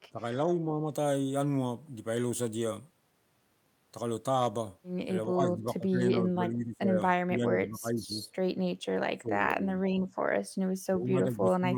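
The speech keeps ducking in level, first from 0.1 to 0.91 s, then from 5.31 to 7.0 s, 7.25 to 8.18 s, 8.96 to 10.07 s and 10.89 s to the end. The dips get deeper up to about 9 to 10 s, from about 10 dB at the start to about 30 dB there, then ease to about 20 dB at the end. That's likely speech suppressed in double talk: with both sides talking, the echo canceller couldn't separate the talker from loudspeaker echo and turned everything down.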